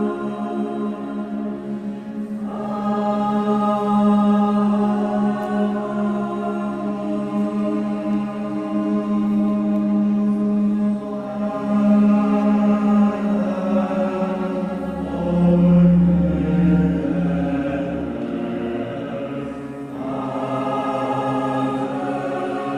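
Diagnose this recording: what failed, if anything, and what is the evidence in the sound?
Nothing in the chain seems to have failed here, and I can't hear anything that points to a problem at any stage.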